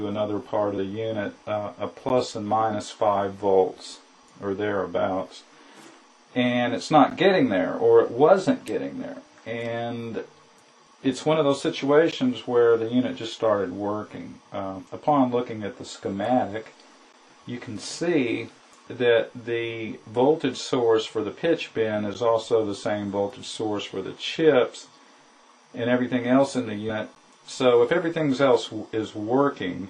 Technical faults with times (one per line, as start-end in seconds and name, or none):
2.09 gap between chunks
7.10 gap between chunks
12.11 gap between chunks
17.13 gap between chunks
22.14 gap between chunks
27.15 gap between chunks